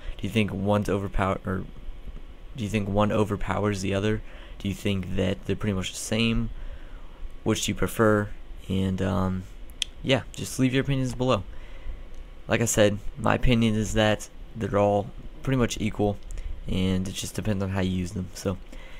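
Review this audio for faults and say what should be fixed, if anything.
No faults turned up in this audio, so nothing needs to be fixed.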